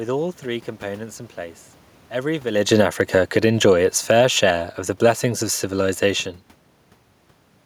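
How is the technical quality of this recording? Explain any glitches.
There's one real glitch in this speech recording: an automatic gain falling event from 2.45 to 4.39 s. The gain control decided the input was too loud or too noisy and eased its gain down by about 8 dB over those two seconds. You hear the level start loud, then sink steadily, and the room noise drops right along with it, which is the tell. A talker shifting position around 2.5 s wouldn't pull the background down like that.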